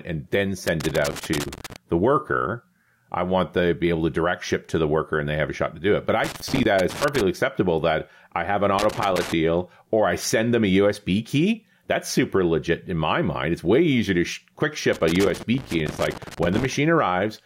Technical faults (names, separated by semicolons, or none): loose connector crackle